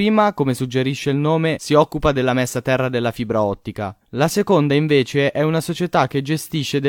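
Nothing stood out on listening to this speech recording.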